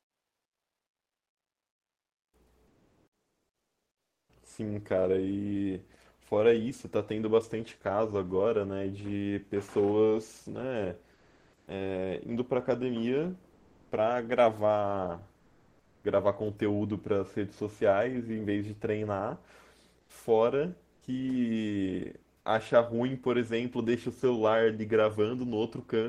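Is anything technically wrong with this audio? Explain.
Yes. Comfort noise replaces the background in pauses at 2.67–4.29 s, 11.13–11.67 s, 13.53–13.91 s, 15.39–16.03 s, 19.99–20.09 s, 20.93–21.01 s and 22.37–22.45 s, likely from Opus discontinuous transmission. The sender stops transmitting in these speech gaps, and the receiver substitutes a flat, featureless synthetic hiss for the real room sound. The level shifts by about 10 dB in the longest gap and by about 7 dB at 13.53 s.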